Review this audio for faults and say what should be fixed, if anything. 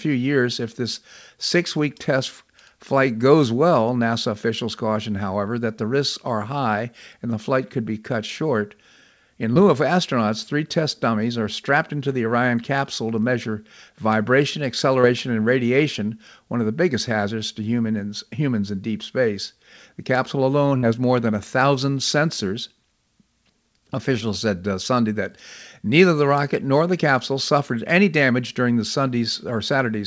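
Short concealed packet loss occurs at 9.54–9.57 s, just before "lieu of astronauts three", and at 15.01–15.05 s, after "capsule to measure vibration". Audio arrived too late. The receiver stretched the last sound, leaving a brief smear.

A burst of packet loss occurs at 20.77–20.84 s, after "capsule alone". The last sound is held and fades. Playback resumes at "more than a thousand", with a short stretch missing.

Adding redundant audio packets and a slightly deeper jitter buffer on the call path would prevent these losses.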